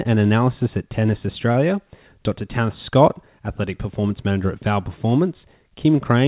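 At 1.52 s a packet arrived late and the jitter buffer ran dry, a short stall from a late packet. The receiver stretched the preceding sound by 25 ms until the packet arrived, then carried on, so nothing is lost. Up to 1.68 s that sound is held slightly too long, with a slight buzz or dip.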